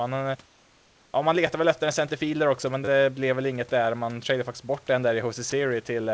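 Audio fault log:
0.46–1.14 s, comfort noise in place of the background: for about 680 ms the room hiss turns flat, steady and featureless, and about 2 dB quieter. The likely cause is discontinuous transmission: the sender stopped sending during the pause, and the receiver filled it with synthetic noise shaped only roughly like the real background, which sits about 37 dB below the loud parts.
1.47 s and 2.85–2.88 s, repeated buffer: two short stutters with hard joins. The one just before "väl efter en centerfielder" is a click. The one between "en centerfielder också men" and "blev väl inget där" is a brief buzz. A 10 ms buffer was replayed once and then three times because fresh audio arrived late. No audio seems to be skipped.
5.50 s, sound dropped by the voice detector: just after "faktiskt bort den där", about 20 ms of sound gives way to steady noise. The likely cause is that the sender's detector mistook the quiet tail of the speech for background and paused transmission, and the receiver played comfort noise in its place.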